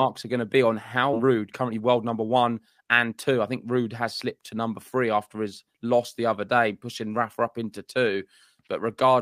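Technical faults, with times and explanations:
1.13–1.15 s: skip ahead. Roughly a second of audio was dropped with no fill, so playback jumps forward and the two sides join almost directly.
1.23–3.13 s: jitter buffer speed-up. An overfull buffer was drained by repeatedly cutting short pitch-period pieces, running about 11% fast at unchanged pitch and removing around 200 ms.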